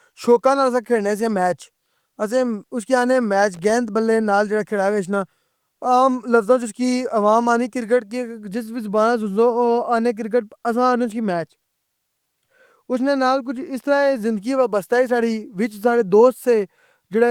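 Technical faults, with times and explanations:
3.54 to 3.70 s, loose connector crackle: right after "آخنے میچ" and before "بلّے نال جیڑا کھڑا", the speech breaks into a ragged burst of scratching for about 0.16 s. A worn or dirty contact is flickering between connected and open, chopping the signal many times in quick succession. The uneven spacing and gritty texture set it apart from a single digital click or a clean dropout, which would be one sharp tick or a tidy gap.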